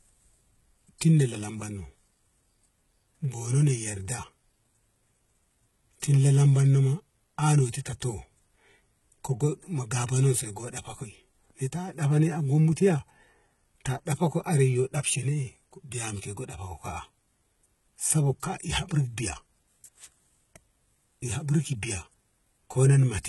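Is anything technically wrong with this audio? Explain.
Yes. Throughout the speech there is heavy damage consistent with HE-AAC compression, likely at a low bitrate around 16 kbps. The treble is rebuilt by copying lower bands upward, so sibilants sound gritty and metallic, harmonics misalign at the crossover, and nothing exists above 11.8 kHz.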